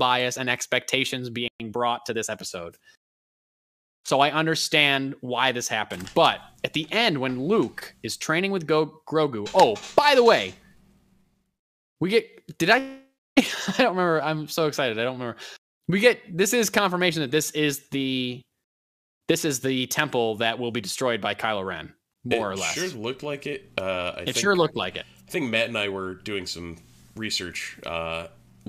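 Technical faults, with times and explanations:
1.48–1.60 s, playback stall: the sound cuts to silence mid-flow for about 120 ms, then resumes. The gap is most likely the player running short of buffered data or its output thread being blocked, leaving nothing to send to the output.
1.60–2.40 s, time-compressed catch-up: for the next 0.8 s the audio runs about 1.15 times faster at unchanged pitch. The player is trimming its backlog by dropping short segments and cross-fading the joins, which causes the hurried texture.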